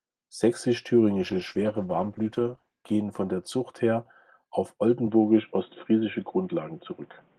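From 1.18 s to 4.37 s the speech goes through a call bitrate drop: the encoder falls from 32 to 13 kbps and stays at its lowest for 1.63 s, so the sound turns coarse and watery with dulled highs. Unlike a device change, the roughness comes from coding artefacts and clears as the bitrate recovers.

At 5.07 s the sound abruptly loses everything above 3.8 kHz and stays that way to the end, with a new background noise about 40 dB below the speech. There is no gap and no level jump. The steady boxy band-limit and the changed noise floor, rather than any watery artefacts, point to the input having likely switched to a poorer device.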